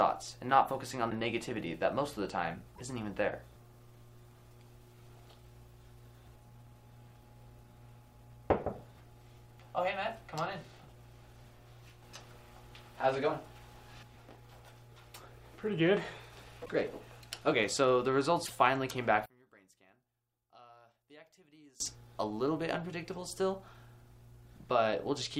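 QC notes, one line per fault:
1.09, 2.75, 16.65, 18.45 s: broken MP3 bit reservoir. Each event is a brief glitch, about 26 ms at 1.09 s and 52 ms at the others, roughly one and two 24 ms frames. Then the audio jumps ahead. The likely cause is dropped frames: the following frames reach back for borrowed data and decode bytes belonging to other frames. The waveform shows a splice-like discontinuity.
19.26–21.80 s: one channel inverted. Over this span the sound drops by about 29 dB and turns faint, as if only a residue remains. The likely reason is reversed polarity on one stereo channel, so when the channels are summed to mono the shared centre content cancels, leaving only their difference. The spectrogram shows a sharply darker block. The waveform collapses to a small trace until 21.80 s.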